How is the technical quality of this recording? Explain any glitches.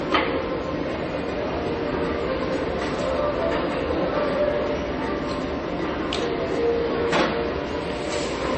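The quality is fairly rough, with a layered character all the way through. It's likely a case of transcoding between lossy codecs: from start to finish, nothing comes through above about 8.3 kHz, so the top end sounds dull. On top of that, three kinds of compression artefact stack up, the different codecs' artefacts heard together. That mix fits a chain like low-rate MP3 into low-rate Vorbis into WMA, where each stage re-encodes the previous one's damage, adds its own, and the narrowest bandwidth sets the ceiling.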